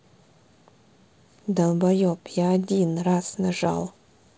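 No technical faults can be heard in this speech recording. It carries the sound of G.722 wideband telephone coding, clear up to about 7 kHz with a light hiss in the upper band and some added grain in the lower band, which fits the codec running at 48 kbit/s.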